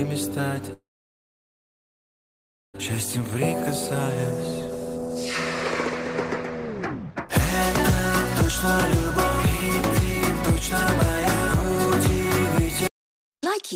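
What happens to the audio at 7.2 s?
Between 7.10 and 7.30 s a jitter buffer speed-up occurs: the receiver trims excess buffered audio by cutting short pitch-period pieces, about a tenth of a second in total, so the sound rushes at 158% speed without a pitch change. A spectrogram shows compressed, unshifted harmonics there.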